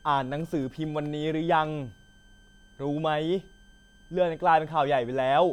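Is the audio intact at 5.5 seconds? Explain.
No, not quite. At 5.5 seconds there's a switching supply whistle under the speech, and it runs through the whole clip rather than just that moment. A switching power supply is cycling at an audible rate, either in burst mode or beating against another supply, so you get a thin high whistle around 1.5 kHz, wandering slightly between about 1.55 and 1.59 kHz, sitting roughly 35 dB below the speech.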